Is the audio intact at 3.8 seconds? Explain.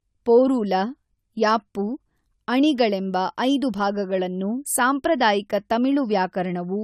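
No, generation loss affects 3.8 s and the whole clip, likely from repeated AAC encoding, so the sound is swirly, hollow and smeared, with nothing above 17.2 kHz.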